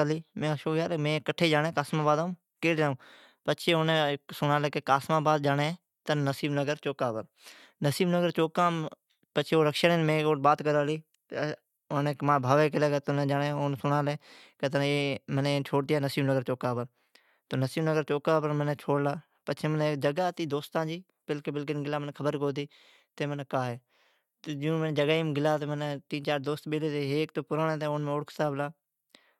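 No technical faults can be heard anywhere in the speech, so there is nothing to place in time order.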